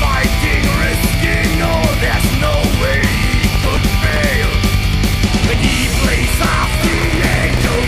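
Processor overload crackle hits from 3.50 to 4.22 s and again from 6.93 to 7.77 s. The processor keeps missing deadlines on tiny buffers of around 1.5 ms, each one dropping to silence, so dozens of hard-edged gaps pile up into gritty tearing over the sound.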